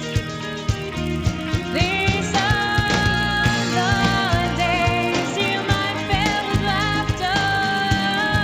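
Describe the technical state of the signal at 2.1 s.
At 2.1 s the resampler restarted on every block, as it does throughout the clip: each 10 ms block is converted from 16 kHz to 48 kHz without its neighbours, so every block edge carries an error, heard as a 100 Hz buzz wherever sound is present.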